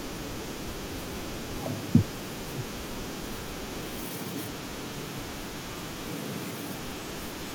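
Compressed frames skipped at 1.81 s and 6.78 s: whole 21.3 ms frames of the speech never play, so the audio jumps ahead roughly 100 ms, then 40 ms, consistent with about four and two lost frames.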